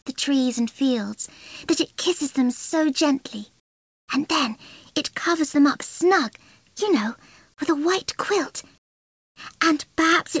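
Comfort noise in place of the background appears from 3.60 to 4.08 s and again from 8.78 to 9.36 s, gaps of 480 and 580 ms. In each pause the background, already about 44 dB below the loudest passages, drops by about 25 dB into a flat, textureless hiss, likely because the sender's voice detector halted transmission and the receiver synthesised stand-in noise. The whole clip, including these fills, has nothing above 8 kHz, which fits a wideband call codec.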